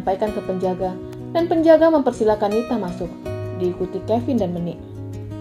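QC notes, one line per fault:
1.13 s, electrical switching spike: a sharp snap, only a couple of milliseconds long, sits on top of the sound and peaks at roughly -20 dBFS. It is likely a brief arc from a nearby switch, relay or static discharge that the audio line picked up as an induced voltage. Because the disturbance is so short and steep, its energy spreads across the whole band and comes through as a dry, hard click.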